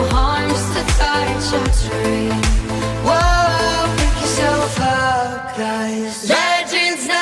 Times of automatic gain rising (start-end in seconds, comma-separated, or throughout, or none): none